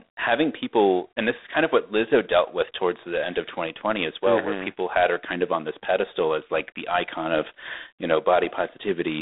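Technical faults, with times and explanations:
Throughout, G.726 ADPCM: the speech sounds squeezed into a telephone band, roughly 250 Hz to 3.7 kHz, with nothing above 3.8 kHz. At 24 kbit/s each sample keeps only three bits of prediction error. That coarse step adds a harsh, rasping hiss that rises and falls with the speech.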